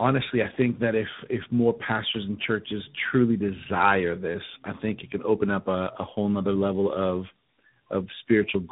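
Throughout the speech, tandem speech coding compounds damage: a low-rate mobile coder, likely AMR-NB, was decoded and re-encoded by an ADPCM coder consistent with G.726, the later coder working on the earlier one's already degraded output. Nothing sounds above 3.8 kHz, leaving the speech muffled, rough and warbly.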